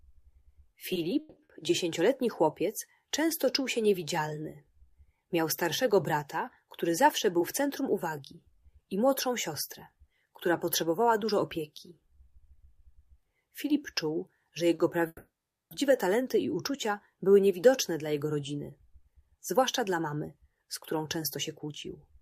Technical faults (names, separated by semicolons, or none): repeated stalls (stutter); jitter buffer speed-up; short stall from a late packet; call audio freeze